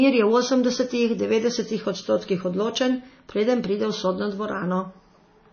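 Speech, with plainly audible damage of the kind MP3 compression at a low bitrate leaves, likely around 24 kbps, throughout the clip. Nothing remains above about 6.5 kHz. Weak detail flickers between frames, giving a watery, swirly texture. Consonant attacks sound smeared.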